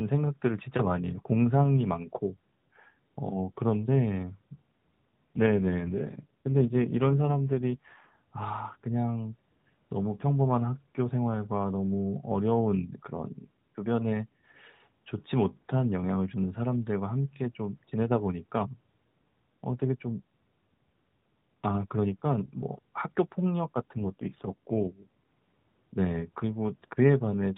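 From 5.36 to 8.14 s the speech turns rougher, buzzier and more synthetic, with no gap and no change in bandwidth, and the same coarsening returns from 23.94 to 25.15 s. Both are AMR rate drops: on a weak link the AMR narrowband mobile codec falls back from a 12.2 kbps mode to something near 5.9 kbps, putting spare bits into error protection, so fewer pulses model the voice until the rate recovers.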